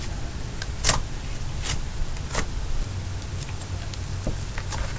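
Aliasing throughout: unfiltered downsampling folds content above 8 kHz back as gritty, unrelated tones roughly 15 dB down, and a spectrogram shows mirrored energy pressed hard against 8 kHz.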